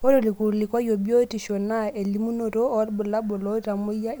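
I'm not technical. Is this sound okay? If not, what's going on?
Yes, no technical faults can be heard anywhere in this recording.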